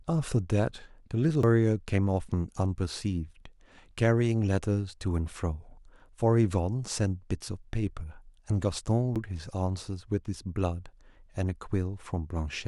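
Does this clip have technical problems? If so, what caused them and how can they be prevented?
Yes. There are CD skips at 1.43 s and 9.15 s. Each has a tiny tick and a mute of a few milliseconds. The laser then jumps to another turn of the spiral. To prevent this, clean the disc and isolate the player from knocks.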